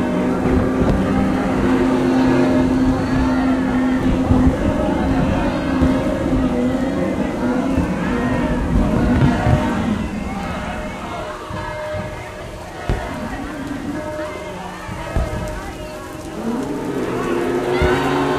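Nothing technically wrong turns up in this recording of sounds; there's no fault to point to anywhere in it.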